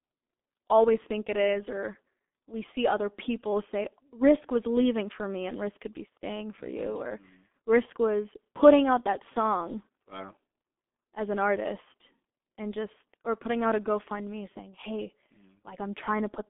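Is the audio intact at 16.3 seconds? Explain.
No. At 16.3 seconds, as throughout the clip, the speech sounds muffled and hoarse, with smeared consonants. This is heavy G.723.1 codec damage: a telephone band of about 250 Hz to 3.5 kHz, nothing above 3.7 kHz, and a coarse voice model in long frames, consistent with roughly 6.3 kbit/s.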